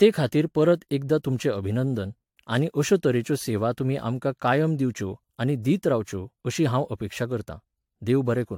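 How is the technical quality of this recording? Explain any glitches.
The technical quality is compromised by generation loss that runs through the whole speech recording. The sound is swirly and hollow, with a smeared, watery texture and blurred consonant attacks, more than a single encode at a moderate bitrate would produce. Content stops near 19.3 kHz. The likely cause is repeated lossy re-encoding, roughly seven passes through an AAC-type codec at around 100 kbit/s. Each pass quantises on a shifted frame grid, so noise and spectral gaps accumulate.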